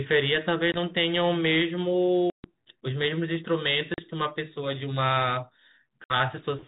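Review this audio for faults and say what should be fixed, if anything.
Packet loss on an ADPCM call leaves hard silent holes at 0.72, 2.30, 3.94 and 6.04 s, about 20, 140, 40 and 60 ms long. Unlike a plain dropout, the speech returns slightly distorted because the decoder's predictor has fallen out of step. Concealment that keeps the decoder state aligned across lost packets would prevent it.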